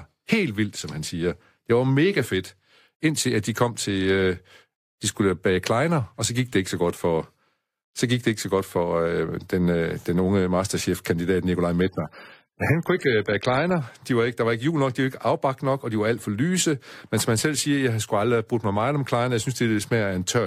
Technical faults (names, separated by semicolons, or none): adaptive stream at a lower bitrate